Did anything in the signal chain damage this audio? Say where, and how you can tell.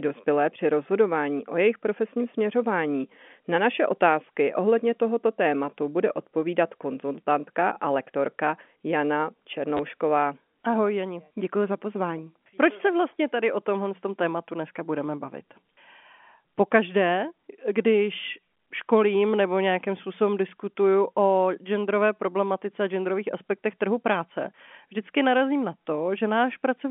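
Yes, at the network: packet loss with last packet repeated, 9.77 to 9.79 s. About 20 ms of audio is replayed as an identical waveform copy, fitting two lost 10 ms packets.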